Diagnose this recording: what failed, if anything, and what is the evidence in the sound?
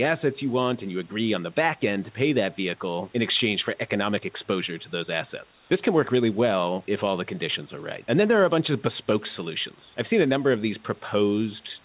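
Comfort noise in place of the background, in call processing: from 5.52 to 5.7 s the room noise turns into a steady, featureless hiss about 4 dB quieter. Unlike a dropout, there is no silence. The receiver likely synthesised it while the sender paused transmission.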